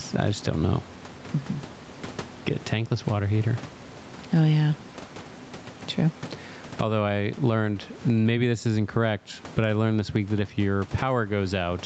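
Throughout the speech, the input gain was likely set far too high for the microphone, so a fast limiter or compressor keeps clamping it on each loud syllable. That is gain pumping: the level swings by around 15 dB, and loud and soft passages are pressed together into a flat, squashed delivery, heard through the call path's 8 kHz bandwidth.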